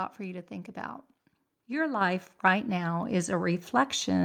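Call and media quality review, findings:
Microphone volume stepped up twice, at 2.01 s by about 5 dB and at 3.03 s by about 3 dB. Speech and background jump together. Component: capture-side automatic gain. Mechanism: the call software judged the input too quiet and raised the device's input volume in single steps.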